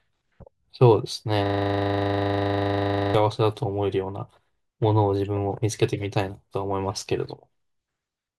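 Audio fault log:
1.46–3.15 s, system hang loop: The speech stops moving forward and one 40 ms slice of audio repeats exactly, back to back, for nearly 1.7 seconds. The computer or its audio driver stalled while the sound hardware kept replaying the same small section of its ring buffer. Each pass restarts at the same point, so the repeats fuse into a rough, rattling buzz at 25 Hz, the loop rate. The slice's length fits a buffer of about 40 ms.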